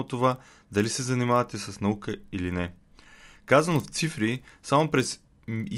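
Speech with a steady 25 Hz buzz throughout from a resampler restarted on every block, which fits 40 ms blocks converted from 24 kHz to 48 kHz; unlike mains hum, it stops when the speech stops.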